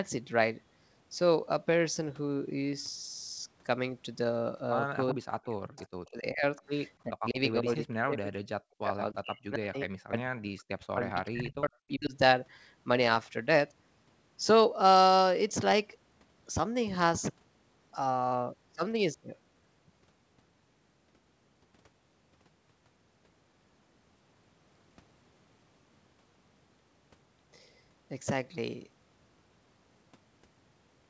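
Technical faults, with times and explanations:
5.10–5.14, 5.77–5.85 and 6.06–6.10 s, echo leak: brief, faint copies of the voice played on the loudspeaker return about 0.39 s late, at about 20, 30 and 40 dB below the speech. The fixed delay points to a likely residual loudspeaker echo the canceller failed to remove, unlike reverberation.
5.13–6.44 and 7.06–12.14 s, speech suppressed in double talk: the talker's level repeatedly dips by as much as about 40 dB, covering roughly 1 s and 4 s in total, likely because the echo canceller mistook the talker for echo while both sides spoke. These are level drops in the talker's own speech with no delayed copy, and the band stays within the call path's 8 kHz limit.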